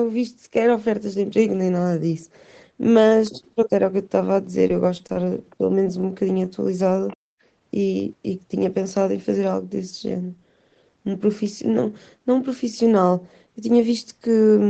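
A speech recording carried over a call, with several network and echo-control faults. From 4.67 to 5.28 s there is repeated packet loss, heard as robotic sound. Audio keeps dropping out in short gaps, the longest about 25 ms. The receiver patches each hole by extending the last sound. About 80 ms of real audio is lost and roughly a fifth of that stretch is filled-in sound, so it turns choppy. At 5.84 to 5.87 s comes a short concealed packet loss. About 20 ms never arrived in time. The decoder bridged it by continuing the previous sound and then blended back, leaving a brief smear or wobble. At 6.01 to 6.05 s there is a short stall from a late packet. The jitter buffer ran dry, so the last sound was stretched by about 22 ms until the packet came. Nothing is lost, but that moment is held slightly too long. From 7.08 to 7.16 s the other side's voice leaks through. It is faint, roughly 25 dB below the talker. 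The likely cause is a loudspeaker on the talker's end that the echo canceller did not fully remove from the microphone. Right after, from 7.16 to 7.44 s, the background is gated by the echo canceller. It clamped the microphone down hard, and the room sound drops by about 40 dB for roughly a third of a second before returning. Nothing is heard above 8 kHz, which fits the call microphone processing and a wideband Opus setting on the WebRTC call path.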